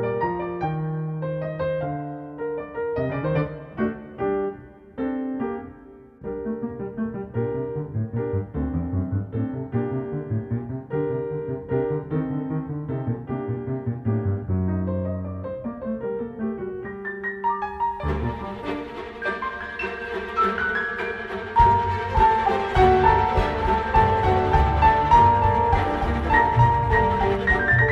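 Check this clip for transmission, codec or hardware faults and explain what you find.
There's one fault here, a doubled audio track, running from 22.93 to 27.35 s. A second full-band copy of the sound trails about one and a half seconds behind, roughly 5 dB down. It's likely a slower capture path feeding the same signal back in. It cuts in and out abruptly, with no decay or room colour.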